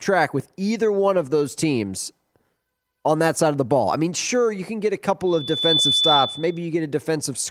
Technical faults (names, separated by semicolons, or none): loudspeaker feedback squeal